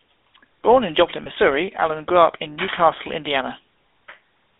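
From start to finish the speech has passed through the GSM full-rate codec. It rebuilds each stretch from a vocal-tract model driven by a sparse, regularly spaced pulse train, which fits the 13 kbps full-rate scheme. The damage is plainly audible: a buzzy, gravelly roughness sits on the voice, and the line band runs only from about 250 Hz to 3.7 kHz, so the low body and the upper brightness are both missing.

From 1.24 to 1.27 s there are lost GSM frames. The gap points to a single 20 ms frame going bad. The decoder filled it by reusing the parameters of the previous good frame, so instead of a clean dropout the sound briefly freezes into a rough, metallic ring before normal decoding picks up again. The loss was too short for that held sound to fade away to silence.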